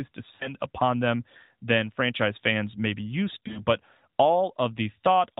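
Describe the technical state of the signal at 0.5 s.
The sound at 0.5 s is drawn out and fading into near silence, then returns briefly thin and rough just before "upon them than franchise". This is lost AMR speech frames between 0.36 and 0.54 s. About 40 ms of missing data, which fits two dropped 20 ms frames of the narrowband AMR stream, was replaced by the decoder repeating its last good pitch and vocal tract settings at falling gain.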